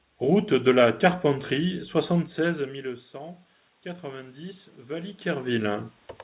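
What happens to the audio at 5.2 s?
At 5.2 s the automatic gain is still rising, part of a slow ramp from 1.59 to 5.92 s. After the input fell by about 18 dB, the gain control lifted its gain by about 7 dB, so voice and background noise swell together. The waveform envelope and the spectrogram's noise floor both climb steadily.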